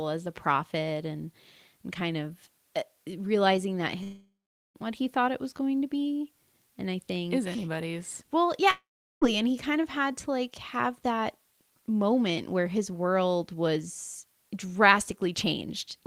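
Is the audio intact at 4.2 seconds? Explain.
No. The sound breaks off at 4.03 s, right after "of uh realizing that", and does not return until 4.77 s, at "what he thought it". The last sound is stretched into a buzzy hiss that fades. Then comes about 0.44 s of silence or low steady noise. This is a long network dropout, likely caused by audio that stopped arriving. Roughly 0.72 s of the original is simply gone.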